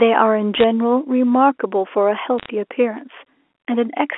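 Bit errors on a digital phone line crackle through 0.55 to 0.64 s and again from 2.38 to 2.49 s. A small fraction of flipped bits corrupt single G.711 samples into sharp ticks, seen as isolated waveform spikes and thin vertical streaks reaching the 3.4 kHz band edge.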